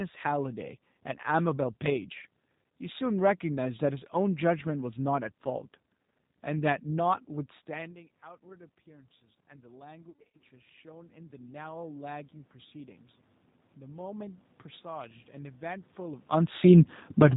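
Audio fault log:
Throughout: G.729 codec. The speech is band-limited to below 4 kHz and sounds plainly rough and slightly synthetic, consistent with 8 kbit/s G.729A coding, which rebuilds each 10 ms frame from a vocal tract filter, a pitch predictor and a few pulses.
10.10 to 10.40 s: VoIP packet loss concealed by the speech codec. About 210 ms of audio went missing across a 300 ms stretch, the longest gap 90 ms, which fits seven lost packets. The decoder extended the last pitch and filter at falling gain, giving a buzzy or noisy, fading smear, with weakened speech lingering briefly afterwards.
13.78 to 16.95 s: automatic gain rising. The gain control judged the input too quiet and raised its gain by about 6 dB over roughly three seconds, so speech and room noise swell together; a talker shift near 16 s overlaps the end.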